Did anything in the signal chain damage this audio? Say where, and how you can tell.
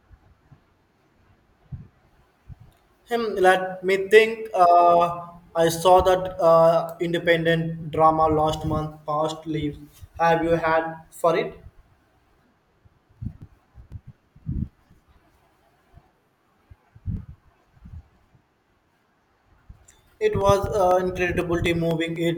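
Yes. The damage is at the driver or buffer stage. From 13.17 s to 22.16 s the speech carries regular ticks every 0.25 s, around forty of them. These are periodic USB or driver dropouts. Something stalls the audio path on a fixed cycle, and each stall leaves a gap of silence roughly two milliseconds long.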